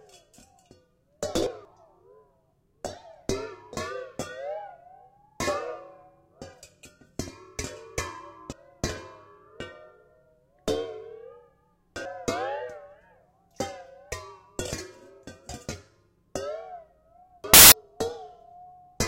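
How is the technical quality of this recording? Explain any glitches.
The recording has two kinds of decoding glitch: four jumps where compressed audio went missing, and one tiny burst of corrupted data.

Compressed frames skipped at 1.47–1.65 s, 8.52–8.80 s, 11.87–12.05 s and 17.44–17.72 s. Whole compressed frames never reached playback, so the sound leaps forward by roughly 200 ms at the first three and by about half a second at the last. That missing stretch of audio is what sets these apart from the corrupt frame.

Corrupt FLAC frame at 13.35 s. Flipped bits sent the FLAC decoder's prediction off course, at worst until the frame ended. This produces an error peaking at only about −62 dBFS, so it is very faint. Nothing is skipped, and the following intact frame plays cleanly.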